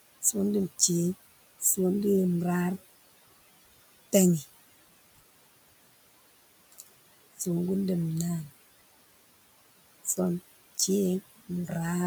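Noise suppressor artifacts run through the whole clip. The processor estimates the steady background, here room noise sitting about 18 dB below the speech, and pulls down each frequency band it judges to be noise, frame by frame, by about 19 dB. The background therefore drops away in the pauses and comes back up underneath the speech whenever it resumes, so the background audibly pumps in step with the talking instead of holding level.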